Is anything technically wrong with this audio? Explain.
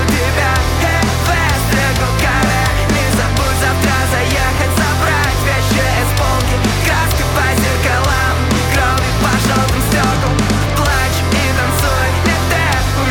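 Yes. From about 5.08 s to 8.57 s there are periodic USB or driver dropouts, one every 0.125 s, roughly thirty in all. At each interval something blocks the USB bus or audio driver and a tiny slice, around half a millisecond, is skipped rather than replaced with silence. The result is a steady train of ticks, eight per second, heard only where signal is present. A waveform shows small discontinuities at regular spacing; a spectrogram shows thin vertical broadband lines.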